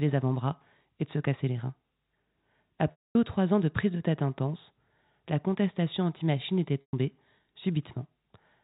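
A held, buzzy tone fades to silence from 2.91 to 3.15 s, and again from 6.81 to 6.93 s, before the speech cross-fades back. This is packet loss with pitch repetition: the receiver repeated the last pitch period to cover 240 ms and 120 ms of missing audio.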